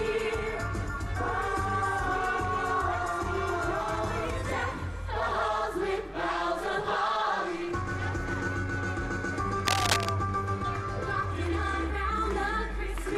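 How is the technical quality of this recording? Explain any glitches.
The recording has two technical faults. From 5.20 to 8.48 s there is periodic clock jitter: interference is modulating the converter's sampling clock at around 300 Hz, so every frequency component acquires sidebands spaced about 300 Hz either side, strongest on the highest content. This gives the sound a rough, metallic edge. From 9.60 to 10.11 s there is cable scratch noise, most likely from a worn cable or connector being moved so its contact resistance fluctuates rapidly. This injects dense, irregular bursts of noise at roughly the level of the sound itself, heard as a brief scratching rustle.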